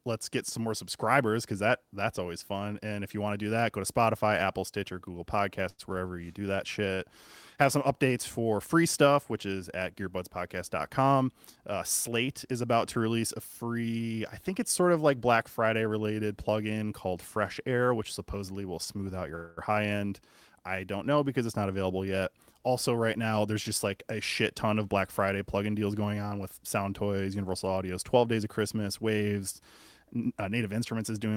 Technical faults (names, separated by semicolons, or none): short stall from a late packet; jitter buffer speed-up; call audio freeze